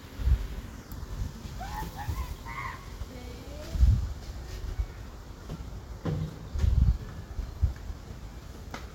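No technical fault can be heard anywhere in this recording of sounds.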